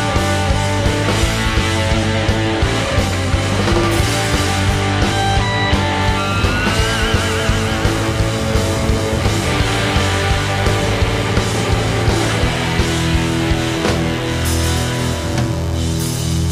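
From 6.01 s to the end, mains buzz sits roughly 15 dB below the signal: a steady, raspy drone from switching spikes at 100 per second, twice each 50 Hz cycle. A spectrogram shows evenly spaced horizontal lines at 50 Hz harmonics reaching several kHz.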